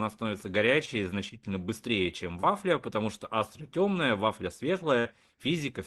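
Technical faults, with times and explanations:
0.85–0.89 s and 2.41–2.45 s, short concealed packet loss: about 20 ms of audio went missing each time, once just before "значительно быстрее чем" and once between it and "потому что". The receiver filled each gap by carrying the preceding sound forward and then blending back into the real signal. Each event is a brief smear or wobble rather than a silence. It sets itself apart from a burst because nothing audibly sustains or fades, and the flow of the speech carries straight on.
4.99–5.07 s, burst of packet loss: right after "темная вафля", about 60 ms of the signal never arrived in time. The decoder stretched the last sound across the hole while lowering its level, so a held, dwindling buzz or hiss stands in for the real audio. The speech then resumes further along with that stretch gone. The gap is about three times the length of each of the earlier events. 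This all comes through a call path whose audio tops out near 12 kHz.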